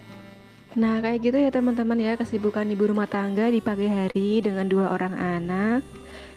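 From 3.95 s to 4.96 s the sound catches and drags in a run of brief hitches. Ten short holds are spread across that second, the longest about 32 ms, adding roughly 110 ms of filler with nothing actually lost. These are repeated stalls (stutter). Packets reached the receiver late or more slowly than playback consumed them, so its jitter buffer kept running dry. Each time, the receiver extended the last sound to bridge the wait, which covers about 11% of the span.

From 5.28 s to 6.36 s the sound slows to about 90% of its normal pace while the pitch stays put, so sounds stretch out and a faint warble can creep in. This is a jitter buffer slow-down. With its reserve running low, or after raising its target delay, the receiver rebuilt its cushion by repeating single pitch periods and slivers of pauses many times over, inserting about 115 ms into that stretch.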